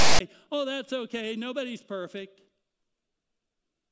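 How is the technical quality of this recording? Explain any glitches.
The recording has one clear glitch at the very start of this speech clip.

File tags played as audio, 0 to 0.21 s: a block of text metadata was decoded as samples, giving a harsh, one-sided rasp with abrupt edges, followed by dead silence where the tag's zero padding was read as audio, before the speech begins.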